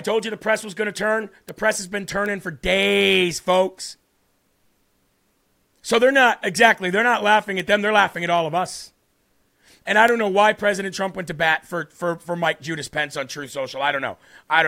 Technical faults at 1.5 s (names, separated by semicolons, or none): bit error spike